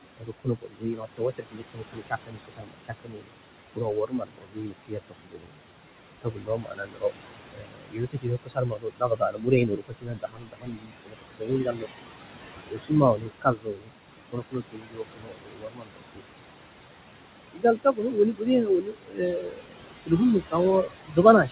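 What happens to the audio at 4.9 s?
At 4.9 s you're in the middle of speech cut by the noise suppressor, which runs from 3.76 to 5.6 s. The suppressor mistakes part of the speech for background and pulls it down by as much as about 22 dB, so around a second and a half of soft consonants and word endings come out swallowed and faint.

The noise suppressor artifacts that run through the whole clip are also present at 4.9 s. The suppressor drops the room noise by about 21 dB frame by frame, so the leftover background sinks between the words and rises under them.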